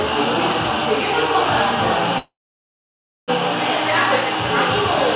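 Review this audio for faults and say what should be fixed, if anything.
A call audio freeze runs from 2.18 to 3.30 s. The sound stalls, carries on briefly as a fading fill, then goes nearly silent for about 0.96 s before resuming where it stopped. Nothing is lost, but playback now lags about 1.1 s. The likely cause is delayed packets draining the jitter buffer. To prevent it, stabilise the network path or allow a deeper adaptive jitter buffer so delayed packets do not empty it.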